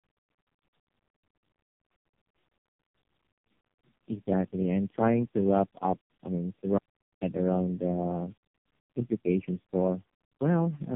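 Rough, muffled and warbly speech throughout, with nothing above 3.7 kHz, is the sound of tandem speech coding: the call passed through three low-rate speech codecs in a row, fitting G.723.1 then AMR-NB twice with G.711 links between, each re-encoding the previous coder's damaged output. At 6.78 s, after "up I mean to", the speech cuts to total silence with no room tone until 7.22 s, resuming at "around the". This audio dropout to silence lasts about 0.44 s and likely comes from the input briefly being lost while silence was recorded, so whatever was said in that gap is gone.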